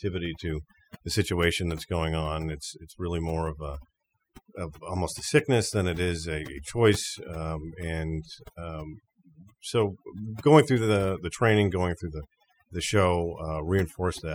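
From start to finish the speech has overdone noise removal. The denoiser was pushed too hard, so it shuts down frequency bands that sit near its noise estimate, taking quiet parts of the voice along. Gaps go nearly silent with twinkly specks.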